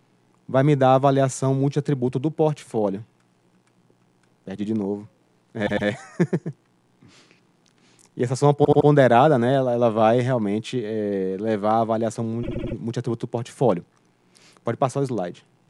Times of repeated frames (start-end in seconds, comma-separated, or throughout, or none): 5.66-5.87, 8.63-8.87, 12.42-12.74